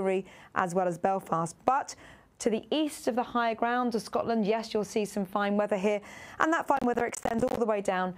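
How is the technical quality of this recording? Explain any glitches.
The recording has one glitch near the end. From 6.77 to 7.57 s there is processor overload crackle: the processor repeatedly missed its deadlines for buffers of roughly 10 ms, and each missed buffer became a brief hard-edged silence. Dozens of these tiny gaps in quick succession sound like gritty tearing over the audio. Unlike a single dropout, this is a dense burst that stops once the load eases.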